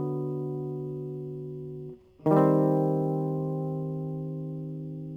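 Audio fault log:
Throughout, sample clock jitter: the music carries a fine hiss and roughness that swells with loud, bright passages and drops away when the music quietens. The converter's clock wanders by a few microseconds, so steep waveform slopes are sampled slightly wrong. The resulting error sits roughly 40 dB below the music.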